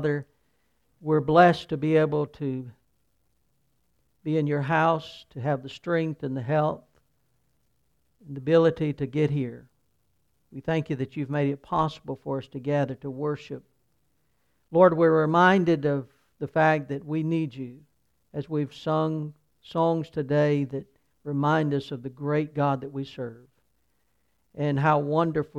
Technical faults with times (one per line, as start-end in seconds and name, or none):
none